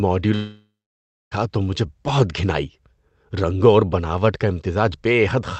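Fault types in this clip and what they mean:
Long network dropout: from 0.35 to 1.33 s the receiver stretches the last sound into a fading buzz, then about 0.6 s of silence before "تو مجھے بہت گھن", likely from lost packets.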